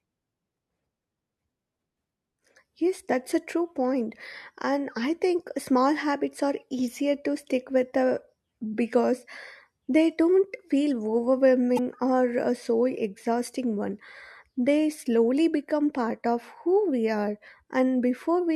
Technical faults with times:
11.75-11.79 damaged data in a compressed stream

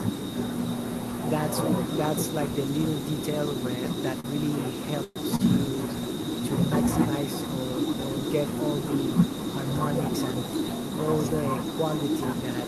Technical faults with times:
0.00-12.67 echo with no canceller
4.20-4.27 short stall from a late packet
5.04-5.19 call audio freeze
5.36-5.42 short stall from a late packet

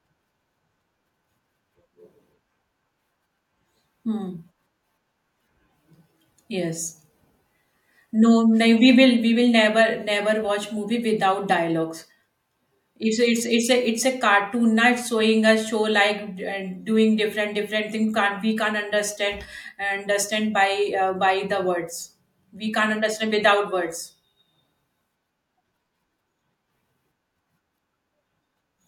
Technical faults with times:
none

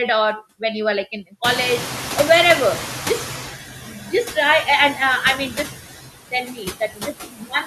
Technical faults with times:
0.00-7.66 noise suppressor artifacts
1.44-3.52 noise suppressor catching up
3.83-4.36 speech cut by the noise suppressor
5.52-5.68 speech cut by the noise suppressor
6.31-7.66 speech cut by the noise suppressor

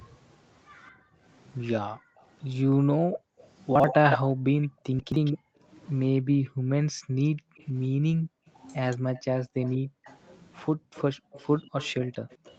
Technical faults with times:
0.91-12.58 speech suppressed in double talk
2.21-2.26 echo leak
3.39-5.38 echo leak
3.75-3.84 chunks out of order
4.99-5.16 chunks out of order
7.57-12.55 echo leak

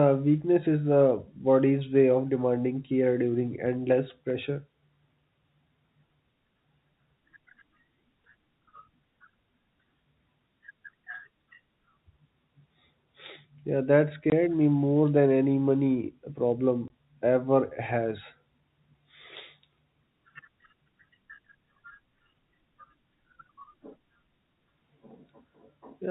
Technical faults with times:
14.30 packet loss filled with silence
16.88 packet loss filled with silence

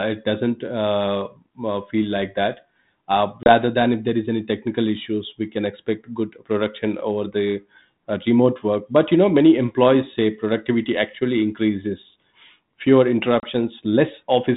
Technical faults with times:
3.43-3.54 packet loss on an ADPCM call
13.40-13.45 packet loss on an ADPCM call

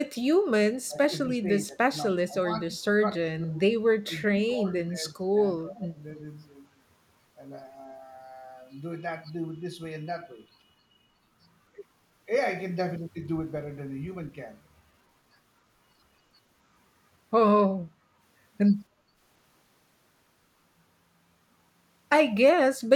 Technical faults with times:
0.05-0.25 speech suppressed in double talk
0.85-3.59 speech suppressed in double talk
2.10-2.16 echo leak
4.06-5.32 speech suppressed in double talk
5.64-6.19 speech suppressed in double talk
17.89-18.20 background gated by the echo canceller
18.89-19.16 background gated by the echo canceller

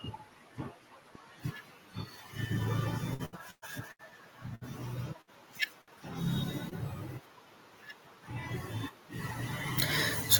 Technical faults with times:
3.13-4.12 repeated packet loss (robotic sound)
4.55-4.64 short stall from a late packet
5.21-5.30 burst of packet loss
5.81-6.02 short stall from a late packet
6.69-6.74 short concealed packet loss

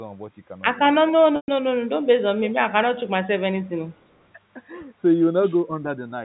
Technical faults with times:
1.36-1.48 packet loss with pitch repetition
3.50-3.60 speech suppressed in double talk
4.01-4.24 echo leak

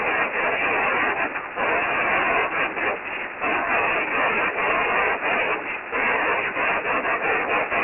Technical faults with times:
0.00-7.84 Dialogic VOX ADPCM

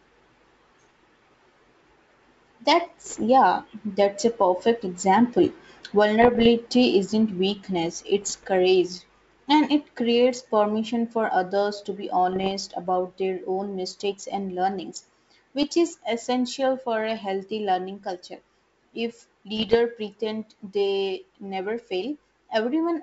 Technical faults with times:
3.06-3.24 bit errors on an ADPCM link
6.22-6.47 bit errors on an ADPCM link
8.21-8.47 bit errors on an ADPCM link
12.32-12.51 bit errors on an ADPCM link
15.62-15.72 bit errors on an ADPCM link
19.57-19.76 bit errors on an ADPCM link

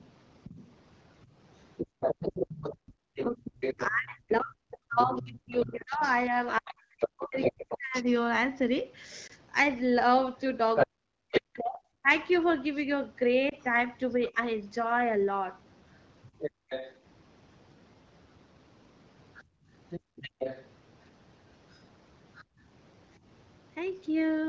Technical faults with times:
0.00-23.17 other side's voice leaking through
1.86-2.98 background gated by the echo canceller
3.24-14.37 speech suppressed in double talk
9.27-9.32 lost AMR speech frames
13.50-13.54 lost AMR speech frames
16.51-22.61 background gated by the echo canceller

